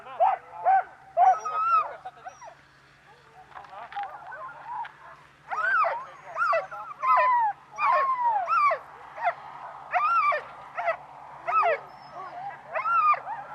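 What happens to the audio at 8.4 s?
Nothing goes wrong at 8.4 s; the audio plays through that moment intact, with no dropout, click, distortion or other audible fault.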